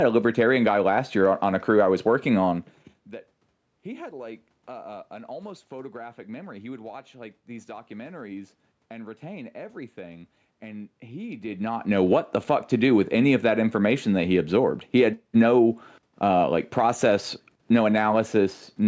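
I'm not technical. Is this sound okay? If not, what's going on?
Yes, nothing stood out when listening; the voice getting quieter or louder around 2.5 seconds and again around 11.5 seconds is just the talker moving relative to the microphone.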